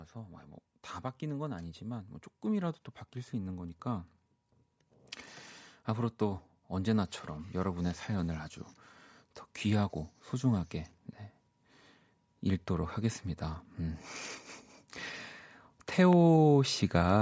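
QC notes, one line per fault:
1.19–4.13 s, automatic gain rising: the automatic gain control judged the incoming level too low and began raising its gain, not in one step but as a slow climb of about 4 dB spread across nearly three seconds. Because the added gain applies to everything the microphone picks up, the speech and the room noise behind it swell together, so the whole sound grows louder and closer without any change in how the talker is speaking.
16.13–16.15 s, loud pop: a single brief pulse lasting only about 20 ms sits on top of the speech, peaking at around 10 dB above it, while the speech carries on underneath. The shape points to a sudden voltage step entering the chain, most likely from a connector, a switch, a static discharge or a driver glitch, which the following stages round off into one sharp pop.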